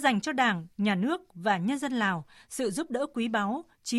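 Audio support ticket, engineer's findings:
No audible defects found across the speech recording; nothing to attribute to any component, no action required.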